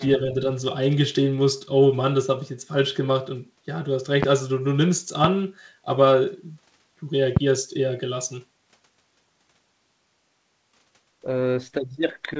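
A loud pop lands at 4.23 to 4.25 s, again at 5.24 to 5.27 s and at 7.37 to 7.39 s. Each is a single sharp thump, around 20 dB above the speech, which carries on unbroken beneath it. That intact speech marks it as an added electrical pulse, likely from a switch, plug or static, rather than a dropout click or plosive. The band-limited call sound, with nothing above 8 kHz, fits G.722 at 64 kbps.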